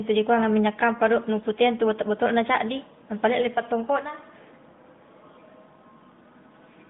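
No faults are present in this speech recording.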